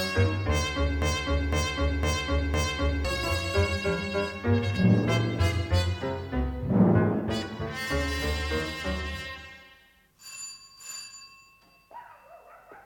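From 1.02 s to 3.05 s, a fragment of about 0.51 s repeats exactly four times back to back, a broken-record loop that replaces whatever audio belonged there. The likely cause is a stalled player, encoder or stream resending its last held fragment.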